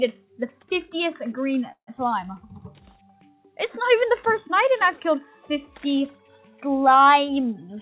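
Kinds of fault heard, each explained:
call audio freeze: Packets were likely held up in transit, so the jitter buffer ran dry at 1.72 s and the receiver had to invent sound to fill the wait. It carries on the last sound as a fading buzz or hiss that sinks to silence for about the last 90 ms of the 152 ms hold. At 1.89 s the audio resumes exactly where it stopped, so nothing is lost. The whole stretch simply plays later.
skip ahead: Shortly after the freeze, the delay that had built up was dropped at once. Roughly 70 ms of waiting audio was discarded at 1.97 s rather than played late. Playback lurches forward with almost no gap, just a splice of a couple of milliseconds. The two sides of the missing slice are butted together, so a small piece of sound vanishes and the flow jumps.
jitter buffer slow-down: The jitter buffer was running low on audio, so it stretched what it had. It repeated single pitch periods and bits of pauses many times over from 2.94 to 3.37 s. 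This adds 66 ms and drops playback to about 86% speed while the pitch stays the same. Sounds in that stretch come out drawn-out and sluggish.
jitter buffer speed-up: Near the end, the buffer held more audio than its target and trimmed the excess. It cut out short pieces of one or a few pitch periods in quick succession from 7.36 to 7.76 s. Roughly 50 ms disappears, and playback runs at about 112% speed with the pitch unchanged. The closing sound comes across rushed and slightly clipped in its timing, all within the narrow band that tops out at 4 kHz.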